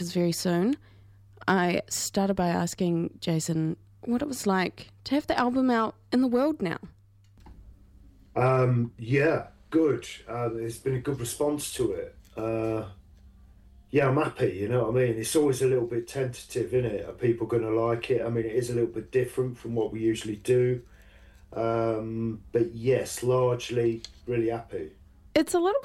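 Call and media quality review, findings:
Call and media quality review findings: no faults found in this audio.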